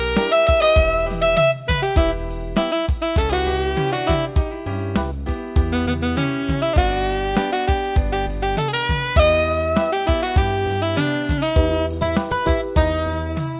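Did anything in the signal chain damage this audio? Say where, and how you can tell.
No, nothing audible points to damage at any stage between capture and playback.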